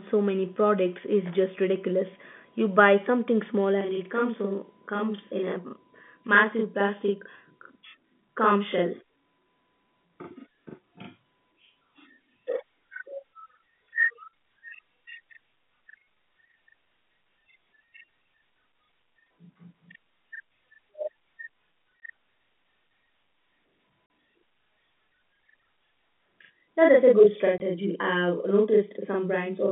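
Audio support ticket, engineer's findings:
Channel delay (doubling) from 3.81 s to end. One channel about 40 ms late, summed to mono. Speech heard twice, like a slap echo.

Packet loss filled with silence at 22.0 s, 24.06–24.1 s and 27.58–27.6 s. Gaps of 20, 40 and 20 ms, which fits 20 ms packets. Hard edges, through the 3.5 kHz G.711 telephone band.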